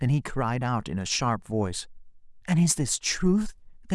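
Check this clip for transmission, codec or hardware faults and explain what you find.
Nothing here needs flagging; I listened for trouble in the transmission, the codec and the hardware and came up empty.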